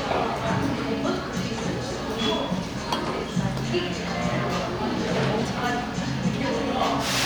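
The signal holds steady throughout, with no technical faults to be heard anywhere in the audio.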